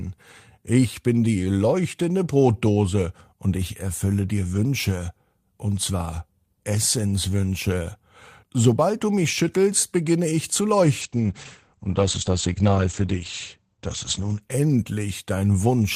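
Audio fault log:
11.03–14.47 s, call bitrate drop: after "schüttelst beginne ich zu", the speech turns rough and muffled, consistent with a fall from about 32 to 11 kbps. The spectrogram shows everything above 8 kHz cut away.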